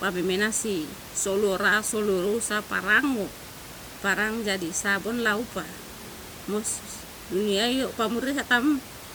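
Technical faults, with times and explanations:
No technical faults can be heard in the speech, and the room's own background noise sits about 16 dB below it as part of the recording itself.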